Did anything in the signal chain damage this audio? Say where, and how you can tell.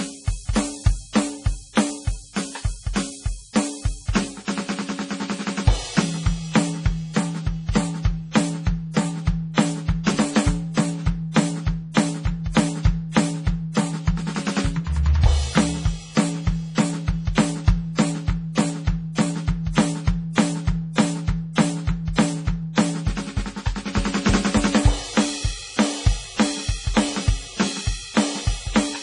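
Yes. The damage sits at the codec stage, likely MP3 compression, and runs through the whole music clip. The encoder discards everything above 10.5 kHz and the remaining detail turns watery and swirly as weak components flicker, which fits a very low bitrate around 32 kbps.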